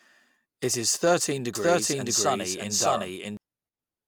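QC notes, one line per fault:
1.55–3.37 s, doubled audio track: just after "is thirteen" a second full-band copy of the speech enters abruptly, trailing the original by about 0.7 s at roughly the same loudness, then cuts off just as sharply. The lagging copy is dry, with no decay or room colour, so it reads as a second playback rather than an echo. It is likely from the signal being captured twice, once via a slower path, or an edit leaving two out-of-step copies.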